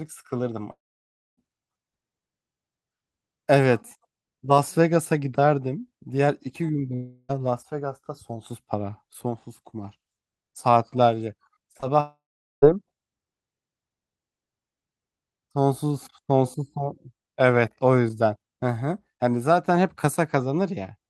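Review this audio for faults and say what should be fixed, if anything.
Three long network dropouts, likely from the stream stalling, cut chunks out of the sound. At 0.71 to 1.39 s about 0.66 s is lost. The receiver stretches the last sound into a fading buzz, then leaves roughly 0.6 s of near-silence. At 6.95 to 7.31 s about 0.34 s goes missing, and this one is smeared over with concealment the whole way rather than dropping to silence. At 12.00 to 12.64 s about 0.62 s vanishes, with around 0.43 s of it silent. Each time the audio resumes further on, without the missing part. A larger jitter buffer, FEC or redundancy on the sender, and a steadier network link would help prevent these.

There are also two bits of short concealed packet loss, at 11.73 to 11.77 s and 11.81 to 11.84 s. Each loses roughly 20 ms, and the decoder patches the hole by extending the last sound before blending back into the real audio. 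You hear a quick smear or wobble, and a short consonant could drop out. Both sit just before the third dropout, so it looks like the link was already failing there. Enabling Opus in-band FEC and reducing packet loss on the path should cut these down.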